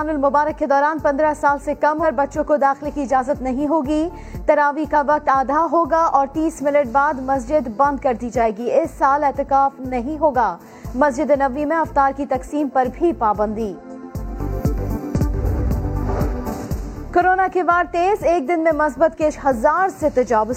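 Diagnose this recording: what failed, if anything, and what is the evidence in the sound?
Codec stage: damaged data in a compressed stream. Short blips at 2.0, 13.75, 15.14 and 19.28 s, where corrupt frames threw the decoder out of sync.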